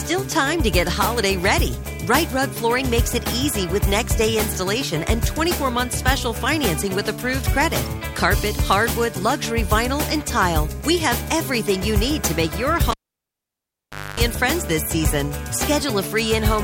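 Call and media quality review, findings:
Pop at 12.91 s, 1.24 s near silence, 255 ms 50 Hz mains buzz, pop on return at 14.20 s. Cable pulled and plugged in: live input lead removed and reinserted; buzz while tip touches before ground connects.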